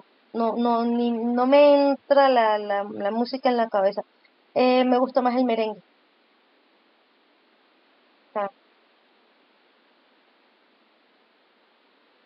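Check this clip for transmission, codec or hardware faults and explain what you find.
No transmission, codec or hardware faults are audible.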